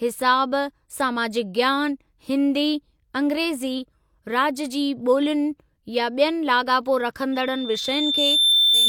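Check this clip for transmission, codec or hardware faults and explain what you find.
One hardware fault is present. From 7.32 s to the end, loudspeaker feedback squeal: the microphone picks up its own loudspeaker and the loop runs away at 3.6 kHz. Unlike a steady interference tone, it swells over about one and a half seconds, ending around 5 dB above the speech.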